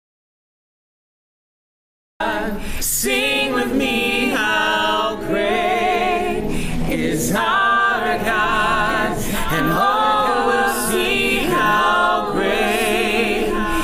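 The clip opens on dead silence with no room tone until 2.2 s, an audio dropout to silence, most likely a lost input while the recorder kept writing silence. From 8.06 s to the end there's a doubled audio track: a dry copy of everything, about 5 dB down, trailing roughly two seconds behind. It's likely a second, slower capture path mixed in.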